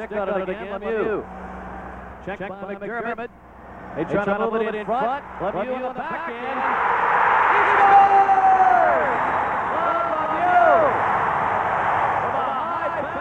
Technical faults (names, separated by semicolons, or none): doubled audio track